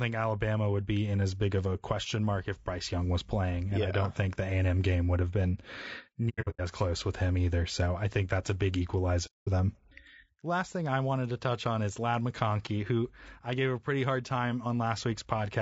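Throughout, low-delay AAC compression makes the speech rough and grainy, with noise between the harmonics and a synthetic-sounding top band. This likely comes from AAC-ELD at 32 kbps, whose short frames resolve pitch poorly.

AAC frame loss with muting occurs at 6.29–6.60 s, before "as close with him", and at 9.26–9.49 s, after "think that's a big". Lost frames decode as silence, so the sound fades into soft-edged holes. The first is scattered gaps over 0.3 s, the longest about a tenth of a second.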